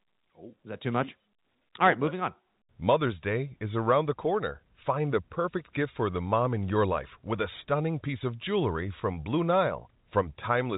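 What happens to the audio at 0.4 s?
At 0.4 s the speech runs intact, with no dropout, click or distortion, only the narrow telephone band of G.711 coding, which keeps nothing above about 3.8 kHz.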